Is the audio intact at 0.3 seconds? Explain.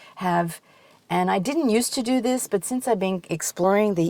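Yes, the audio is intact at 0.3 seconds, with no audible fault at that moment.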